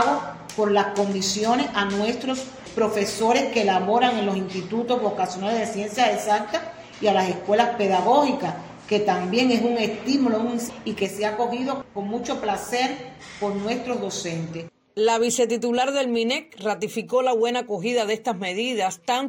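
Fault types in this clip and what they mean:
Sudden gain jump: at 11.05 s the whole signal steps down by about 5 dB in one go, and it stays there right to the end. The sound and the background noise both drop together, with no fade at all, so it's not a performer backing off or a mic moving. It's likely a digital gain setting or bit shift applied from one sample to the next without any ramp.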